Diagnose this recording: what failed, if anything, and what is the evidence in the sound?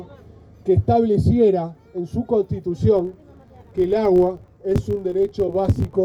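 A filter restarted on every block fault in the buffer-based processing stage starts at 2.97 s and continues to the end at 6.05 s. A steady buzz at 46.9 Hz appears, made of regular ticks whose strength rises and falls with the signal level. The filter is discarding its internal state at each block boundary and restarting from silence, so every block opens with a small transient. The tick rate fits a 1024-sample block.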